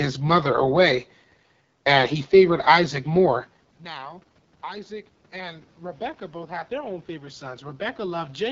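AMR wideband (HD Voice) codec damage runs through the whole speech clip, with nothing above 7.5 kHz. The voice sounds rough and raspy, which fits one of the two lowest AMR-WB rates, around 8.85 kbit/s, where the pulse-driven vocal tract model can no longer carry fine detail. Automatic gain rising follows from 3.95 to 8.42 s. After the talker moves away from the microphone at roughly 3.5 s, the input level drops by about 21 dB, and the gain control climbs by about 9 dB to compensate. Voice and room noise swell together over several seconds.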